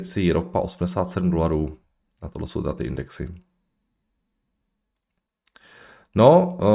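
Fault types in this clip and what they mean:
Nothing wrong turns up here; the speech comes through steady with no dropouts, clicks, distortion or other technical faults to point to.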